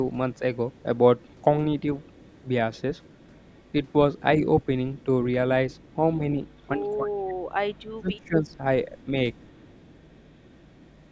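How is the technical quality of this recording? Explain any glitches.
The recording carries a faint trailing echo through most of its length, and the speech is pushed down in two places.

Echo leak: From 0.36 to 1.44 s, 2.01 to 5.05 s, and 5.7 s to the end, a very faint copy of the speech trails 230 ms behind, roughly 30 to 35 dB down. It is likely a far-end loudspeaker echo that the canceller did not fully remove and that was sent back.

Speech suppressed in double talk: At 6.18 to 6.22 s the speech dips slightly, and from 6.77 to 9.12 s it drops much further, by roughly 25 dB across about a second and a half in total. This is likely the echo canceller muting the talker while the other side was also speaking.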